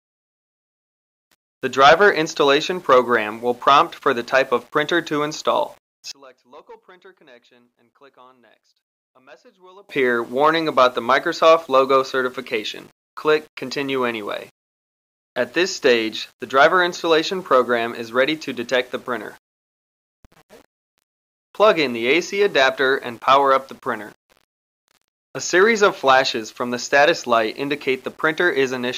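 From 6.12 to 9.89 s the sound collapses by about 30 dB to a faint remnant. The likely cause is one channel inverted, so material common to both sides cancels. Unlike a simple gain drop, what remains is only the faint channel difference.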